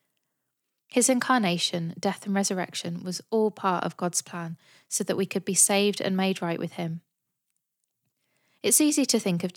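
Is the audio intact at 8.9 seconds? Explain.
Yes, at 8.9 seconds the speech plays through intact, with no audible dropout, click, distortion or other fault at that moment.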